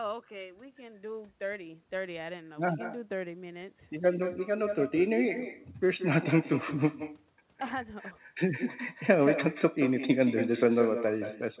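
Speech throughout the whole clip is shadowed by a quieter, thinner copy of itself arriving roughly 150 ms later, about 10 dB below the direct sound. This is echo with no canceller: the far end is playing the call over a loudspeaker, its microphone is picking that playback up, and nothing removes it before it returns across the network. The echo sits inside a band that stops at 4 kHz, which fits a narrowband telephone codec.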